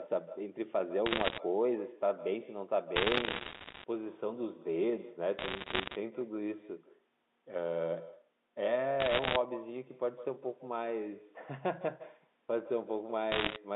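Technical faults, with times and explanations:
Throughout: echo with no canceller. Every phrase is trailed, about 15 dB down and roughly 150 ms late, by a quieter, thinner copy of itself. The far end is playing the call through a loudspeaker, its microphone catches it, and nothing subtracts it before it travels back. Unlike room reverberation, which smears continuously, this copy arrives as a distinct delayed repeat.
1.06–1.38 s, 2.96–3.84 s, 5.38–5.96 s, 9.00–9.36 s, 13.32–13.56 s: bit errors on a digital phone line. In each burst, sharp isolated ticks crackle over the speech, which itself stays intact. They are densest in the last burst. On a G.711 line a flipped bit corrupts a single sample, and when the sign or a high-order bit is hit, the sample jumps by a large amount and gives a brief click. This differs from packet loss, which removes stretches of sound rather than sprinkling clicks over it.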